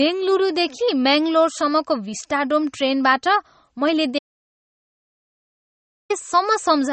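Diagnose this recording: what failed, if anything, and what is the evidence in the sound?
The codec stage failed, most likely an MP3 encoder starved of bits, which fits a rate around 32 kbps. It discards everything above 8.4 kHz and zeroes weak spectral lines frame by frame, so the speech sounds dull and audibly watery, with swirling, smeared consonants.

The input was lost at the capture stage, likely through a disconnected device or failed link, while the recorder kept writing zeros. This audio dropout to silence runs from 4.19 s to 6.10 s, a gap of about 1.9 s with no room tone.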